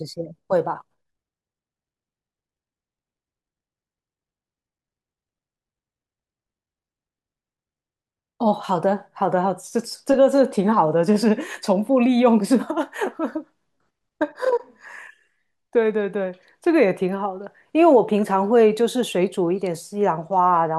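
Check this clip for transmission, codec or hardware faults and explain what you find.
Nothing in this speech recording points to a transmission, codec or hardware fault.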